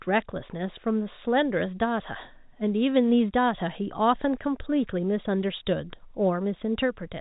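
Nothing stood out on listening to this speech, which comes through with the narrow, telephone-band sound of ordinary G.711 telephone coding.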